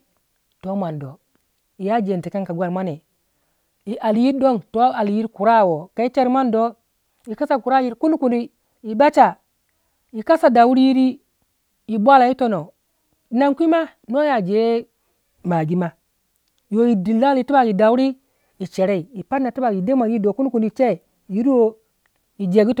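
No technical fault can be heard anywhere in the speech recording; the signal stays continuous and steady throughout.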